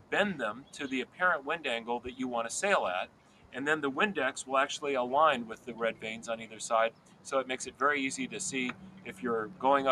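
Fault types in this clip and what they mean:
Noise suppressor applied to music or sounds: A suppressor built for speech is left running, so it treats the steadier parts of this sound as noise and keeps turning them down. The level swings by around 10 dB as it clamps and lets go, which makes the audio pump and thin out. On a waveform the envelope dips in ways the source would not produce. On a spectrogram, sustained bands and decay tails fade abruptly while sharp onsets stay bright.
Sound cut by the noise suppressor: Eight short stretches are mistaken for noise and pulled down harder, by about 9 to 11 dB, for roughly 150 to 500 ms each. They start at 0.53, 1.05, 3.06, 5.53, 6.42, 6.91, 8.73 and 9.48 s. Held or fading material sinks here while transients mostly survive. The waveform shows brief hollowed-out sections, and the spectrogram shows matching darkened vertical patches across the sustained energy.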